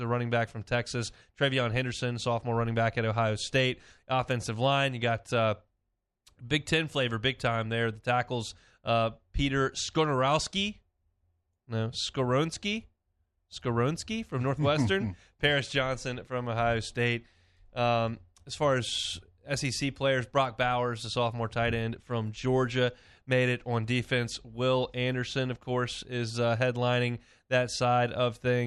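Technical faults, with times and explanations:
24.00 to 25.57 s, mains hum: a ground loop or nearby transformer leaks the 50 Hz power line into the signal path, adding a steady low drone roughly 30 dB under the speech, starting after "made it on" and gone by "course is uh headlining".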